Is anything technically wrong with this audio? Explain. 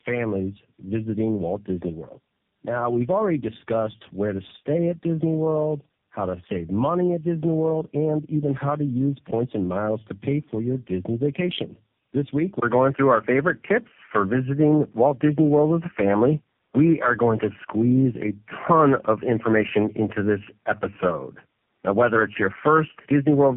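Yes. Throughout the clip, the speech suffers from tandem speech coding. It passed through four speech codecs in a row, ending in what sounds like AMR-NB, and each one re-coded the previous one's errors. The speech is rough, muffled and warbly, with nothing above 3.7 kHz.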